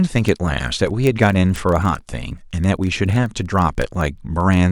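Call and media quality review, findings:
Word clock ticks, 0.12 s to 4.70 s: steady train of sharp ticks, about every 30 ms, roughly 150 in all, uneven strength. Probable component: digital input running on its own clock, drifting by roughly 700 ppm against the sender, dropping or repeating one sample per slip. Unlike codec or packet-loss clicks, spacing stays regular and independent of the speech.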